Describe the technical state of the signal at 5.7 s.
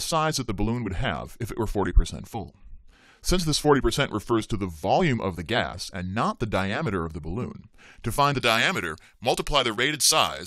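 At 5.7 s the signal is intact, with no fault present at that moment.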